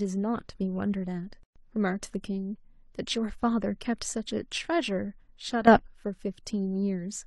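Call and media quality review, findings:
Gap at a join of encoded pieces, 1.43 to 1.56 s: roughly 124 ms dropout with smeared edges in continuous speech, which resumes where it stopped. Separately encoded segments joined untrimmed, leaving encoder start delay and last-frame padding in the stream.

Sudden gain jump, 5.67 to 5.79 s: speech and background noise step up together by about 12 dB for that span, with no ramp. Likely cause is a gain setting or bit shift applied instantly, between consecutive samples.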